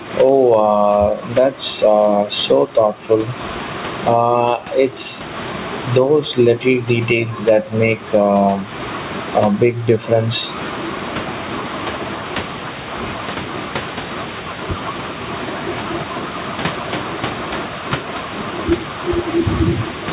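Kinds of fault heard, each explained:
Gain pumping: Throughout the clip the sound is squashed. Loud and quiet syllables sit closer in level, and the level swings by something like 20 dB. The likely cause is microphone gain set far too high, with a fast limiter or compressor clamping down on each loud sound. The room noise sits about 31 dB below the speech and is band-limited at 4 kHz by the call path.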